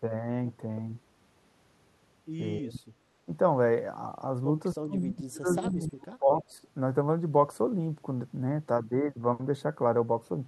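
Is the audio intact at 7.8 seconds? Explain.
Yes, the audio is intact at 7.8 seconds, with no dropout, click, distortion or other fault at that moment.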